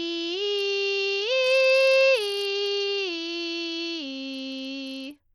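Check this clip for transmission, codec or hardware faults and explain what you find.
One codec fault runs through the whole music clip. The treble thins and flickers, with gritty noise and aliasing riding on the sound, plainly audible throughout. It is likely Bluetooth SBC compression at a low bit pool, around 80 kbps, starving the upper sub-bands of bits.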